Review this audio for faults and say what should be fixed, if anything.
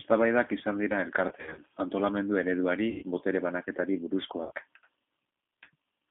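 The whole recording passes through a G.729 codec at 8 kbit/s, limited to a 150 Hz to 3.6 kHz line band. Rebuilding speech from a vocal tract filter and sparse pulses leaves it plainly rough and synthetic, a roughness that simple low-pass filtering would not add. Negotiating a wideband codec such as Opus or G.722 avoids this.

VoIP packet loss concealed by the speech codec occurs three times. The first runs from 1.29 to 1.63 s, after "izan dira", with 160 ms missing in runs of up to 60 ms. The second runs from 2.90 to 3.03 s, after "antolamendu ereduari", with 120 ms missing. The third runs from 4.43 to 4.52 s, after "antolamendu ereduari botere banaketari", with 80 ms missing. In each, the decoder stretches the last pitch and filter into a fading buzzy tone or coloured noise rather than leaving silent gaps or clicks. Jitter buffering with forward error correction would prevent it.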